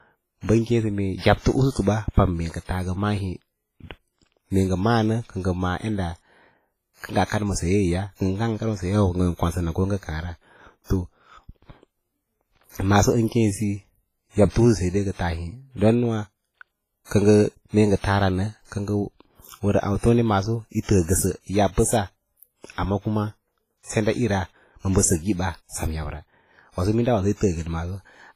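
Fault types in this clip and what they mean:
WMA compression: The speech has been squeezed through a transform codec at a low rate, which fits something like 24 kbps, and the likely cause of the damage is a basic WMA encoder working with long blocks. Its quantisation noise is smeared over tens of milliseconds and weak spectral detail is thrown away, so the voice rings and sounds washy, with hiss that swells and fades with the speech. Nothing is left above about 15.3 kHz.
pre-echo: Because the codec spreads its noise across a whole block, the noise meant for a loud onset late in a block also fills the quiet just before it. Here a short hiss runs 46 to 58 ms ahead of sharp attacks, and those attacks sound softened. It is heard at 1.71 s after "sə mee yabto", at 1.81 s just before "ba pam", at 7.25 s before "kad ma sayeeya", and at 14.49, 17.05 and 23.83 s.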